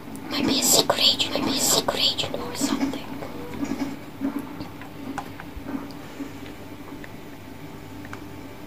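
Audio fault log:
0.99–3.95 s, doubled audio track: a full-band copy trails about one second behind, roughly 5 dB quieter, and starts and stops abruptly. Unlike echo or reverb, it has no decay or room colour. The likely cause is a slower second capture path or an edit holding two out-of-step copies.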